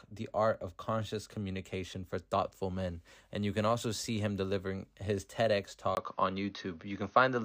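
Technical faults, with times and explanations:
5.95 to 7.45 s, input switched to a poorer device: after a gap of about 20 ms the speech turns duller and boxier through to the end, with nothing above 6.4 kHz, a level shift of a few decibels and faint new background noise sitting well below the speech. The likely cause is the system changing its input mid-recording to another microphone or a headset's call profile, whose narrower band, different tone and own noise floor replace the original pickup.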